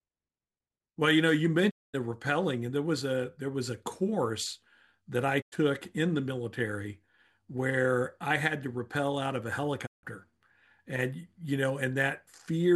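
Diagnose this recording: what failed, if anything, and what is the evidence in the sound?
The speech breaks up three times with a digital broadcast dropout in the reception and decoding stage. The sound fades to silence over about 20 ms and returns after a gap: 1.69 to 1.96 s, 5.40 to 5.54 s, and 9.85 to 10.05 s. The gaps of 224, 96 and 160 ms are all multiples of 32 ms, which fits whole 32 ms frames failing their checksum. The receiver muted until clean frames arrived, so that programme material is gone.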